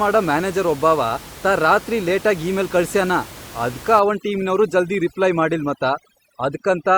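From about 4.0 s to the end, overdone noise removal takes hold. An over-aggressive noise reducer gates off any band near its noise estimate, so the room noise, about 19 dB below the speech, collapses into near-silence with twinkling specks, and quiet speech detail vanishes. A spectrogram shows scattered isolated dots between words and holes cut into the speech harmonics.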